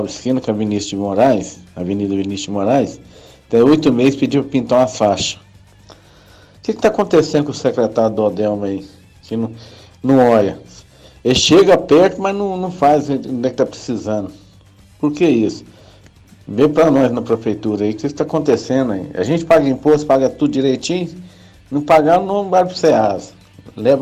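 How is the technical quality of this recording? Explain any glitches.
No technical faults can be heard anywhere in the recording; the signal holds steady and continuous throughout.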